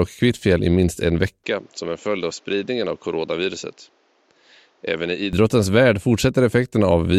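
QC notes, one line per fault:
1.44–5.33 s, input switched to a poorer device: right after "i minst en" the speech goes dull and a bit boxy with no gap at the switch. Nothing gets through above 7.6 kHz, the level drops about 5 dB, and a different, fairly low hiss comes in underneath. That mix of narrower band, new tone and new noise floor points to the recording likely jumping to another mic or headset mode, then jumping back at 5.33 s, where the brightness returns.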